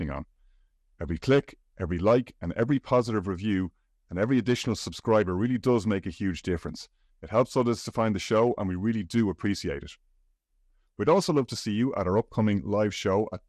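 Likely MP2 compression at a rate that fits about 80 kbps starves the upper sub-bands throughout, leaving the speech dull, with gurgling, granular distortion and flickering highs.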